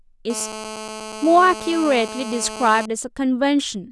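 A nearby 2G phone on a call, bursting about 217 times a second, gets its radio pulses rectified by the audio circuit, producing GSM phone buzz from 0.30 to 2.86 s: a steady, hard, raspy 217 Hz buzz, rich in harmonics, about 13 dB below the speech.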